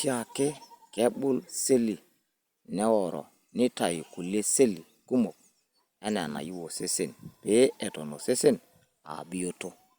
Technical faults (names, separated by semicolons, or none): none